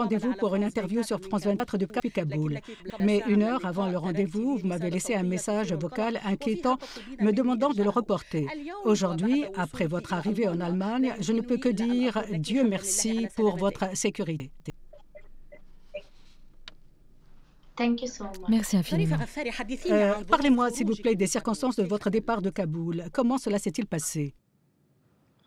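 The audio has chunks out of order at three points. Each one sounds like a brief jumbled moment. At 1.6 to 2.0 s, a 100 ms chunk plays three chunks late. At 2.8 to 3.0 s, one chunk arrives a single step late. At 14.4 to 14.7 s, a chunk lands two steps late. Nothing is missing. The sound is just reshuffled, and each swap leaves three hard joins.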